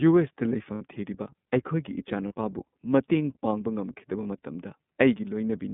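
Speech heard through the iLBC codec, narrowband throughout, with the line passing only about 150 Hz to 3.6 kHz. The voice is intelligible but plainly rough and slightly synthetic, as each frame's excitation is coded on its own. The damage fits the 13.33 kbps mode with 30 ms frames. A spectrogram shows a hard ceiling at 3.6 kHz, nothing at all above it, and smeared, grainy harmonics below it. Lost iLBC frames break in three times: 0.75 to 0.82 s (about 60 ms, which fits two lost frames), 2.28 to 2.32 s and 4.22 to 4.26 s (about 30 ms each, one frame). In each gap the decoder repeats the last pitch cycle blended with noise, so you hear a brief held, buzzy vowel. The voice is back to normal almost immediately afterwards. On a spectrogram these show as short stretches of frozen, evenly repeated harmonics with a noisy wash. In the waveform they appear as closely repeating cycles with noise mixed in.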